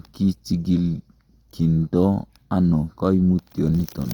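From start to finish the speech sounds rough and grainy, with a noisy texture, though the band still reaches about 20.1 kHz. This is likely Opus compression in its music mode, with a budget near 24 kbps filling bands with noise.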